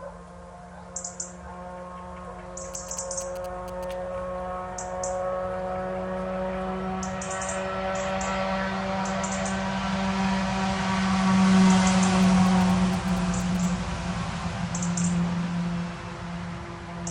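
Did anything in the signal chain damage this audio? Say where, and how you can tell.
Yes. GSM signalling bursts got into the analogue wiring from 2.74 to 3.93 s. A galloping dit-dit-dit of short 217 Hz buzzes sits about 20 dB down. The circuit rectified a nearby phone's radio.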